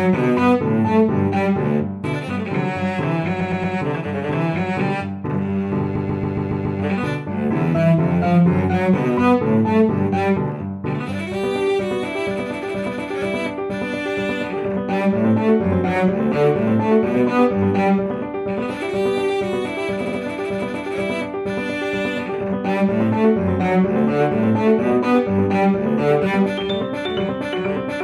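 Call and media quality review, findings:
Repeated frames, 3.39–3.74 s: stutter, the same 116 ms block replayed three extra times. Probable packetizer or file writer emitting one short run of compressed frames more than once; adds about 0.35 s.
5.95–6.78 s: longest stutter, a 139 ms block looping six extra times, adds about 0.84 s.
20.04–20.18 s: brief stutter, a 70 ms block replayed twice more, adds about 0.14 s.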